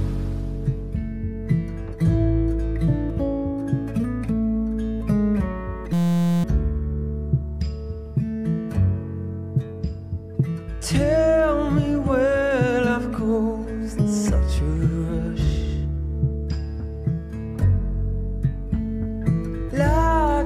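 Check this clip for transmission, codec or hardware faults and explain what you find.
One hardware fault is present. From 5.93 to 6.44 s there is a system hang loop: the system froze while the audio hardware kept replaying one 5.8 ms slice, consistent with a 256-sample buffer. This produces a steady 172 Hz buzz, and about half a second of audio is lost.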